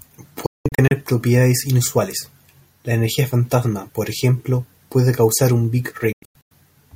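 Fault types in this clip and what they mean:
Digital broadcast dropout: the receiver lost good frames and muted until clean ones came back, so this speech cuts out in clusters of short holes with a very quick fade of about 3 ms. Around 0.46 to 0.92 s you lose 288 ms of audio spread over roughly 450 ms, the longest gap 192 ms. Again at 6.12 to 6.52 s, 288 ms goes missing across 384 ms, with gaps up to 96 ms. Whatever was spoken in those gaps is simply gone.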